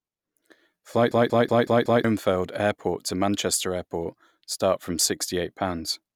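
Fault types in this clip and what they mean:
System hang loop: from 1.12 to 2.04 s the driver stalls while the sound hardware keeps replaying the same 186 ms slice of speech, five times over. The result is a machine-gun stutter at about 5.4 Hz, and the slice length fits an 8192-sample ring buffer. Roughly a second of real audio is lost. On a waveform the identical block repeats exactly. A spectrogram shows one pattern stamped side by side, with sharp vertical edges at each seam.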